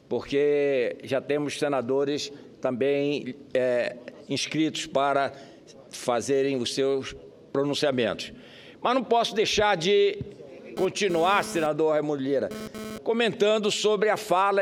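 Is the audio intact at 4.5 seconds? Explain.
Yes, the audio is intact at 4.5 seconds, with no dropout, click, distortion or other fault at that moment.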